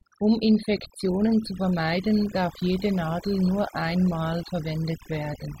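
Throughout the speech, overdone noise removal zeroes bands near the noise estimate, leaving near-silent gaps with twinkling specks; spectrograms show scattered isolated blobs.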